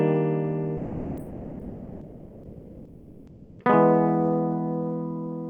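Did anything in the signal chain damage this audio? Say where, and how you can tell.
Yes. From 0.79 s to 3.55 s the music gives way to a flat, steady noise bed for about 2.76 s, of which roughly 1.37 s of real musical content is lost, before the music returns. This is sound dropped by the voice detector, at the call-processing and codec stage. The likely cause is the sender's voice activity detection, consistent with Opus DTX, which classed the music as background and stopped sending, so the receiver filled the gap with comfort noise. On a spectrogram the harmonic structure vanishes into an even, featureless noise band. On the waveform, a low, uniform envelope replaces the music.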